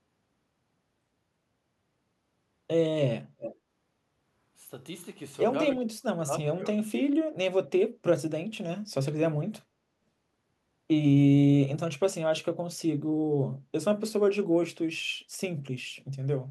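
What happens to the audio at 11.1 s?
Nothing goes wrong at 11.1 s: the speech carries on intact through that moment, with no dropout, click, distortion or other audible fault.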